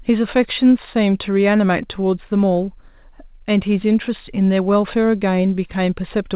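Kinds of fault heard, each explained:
Scattered short gaps: between 1.68 and 2.31 s, about four tiny packet losses were each patched by extending the preceding sound rather than left silent, so the speech picks up brief ticks and smears instead of dropping out. Each hole is very short, the longest around 10 ms, covering only a few percent of that stretch. That sets it apart from one longer dropout or burst loss, heard over the call path's band edge at 4 kHz.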